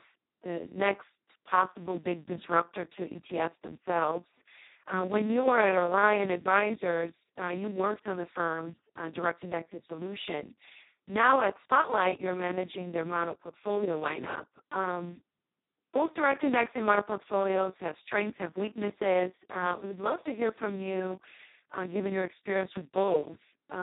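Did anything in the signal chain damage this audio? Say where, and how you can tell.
Yes, at the codec stage: Speex codec damage runs throughout the speech, which is hoarse, noisy and robotic, with nothing above 3.8 kHz. That points to the lowest setting, near 2 kbps, where the excitation gets almost no bits and coding approaches a vocoder.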